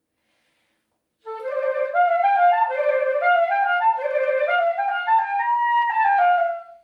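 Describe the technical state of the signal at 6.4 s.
At 6.4 s the signal is intact, with no technical fault present at that moment.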